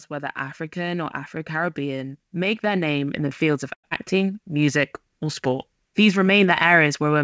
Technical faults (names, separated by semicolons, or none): automatic gain rising; short stall from a late packet; skip ahead; jitter buffer slow-down